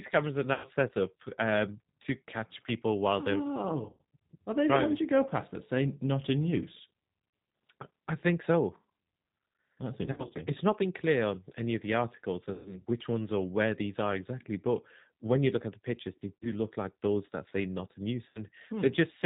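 Throughout, the speech carries plainly audible G.729 codec damage: a rough, slightly synthetic texture from rebuilding the voice from a filter, pitch predictor and sparse pulses, consistent with an 8 kbit/s stream. A spectrogram shows nothing above 4 kHz and smeared, grainy harmonics.

VoIP packet loss concealed by the speech codec strikes at 0.54–0.68 s (after "cameras are"), 3.89–4.01 s, 10.06–10.33 s (scattered, about 140 ms lost), 12.54–12.80 s (after "any of the articles"), 16.38–16.49 s and 18.29–18.44 s (after "that say not in"). Each gap, 50 to 140 ms lost, is bridged by the decoder repeating its last pitch and filter at falling gain. This produces a buzzy tone or coloured noise that fades, seen as a flat, repeated spectrum on the spectrogram and a decaying envelope on the waveform, with weak speech just after.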